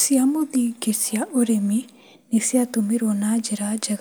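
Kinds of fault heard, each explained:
No technical faults can be heard in this recording.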